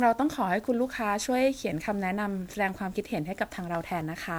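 From start to finish, the speech has a swirly, watery texture. It sounds hollow, as if parts of the spectrum keep dropping out and returning. Consonant attacks are blurred and soft. This points to generation loss. The audio was likely decoded and re-encoded with MP3 about seven times, at a rate that fits 128 kbit/s. Each pass quantised the sound again on a shifted frame grid. The noise and spectral gaps piled up, far beyond what one encode at that rate would leave.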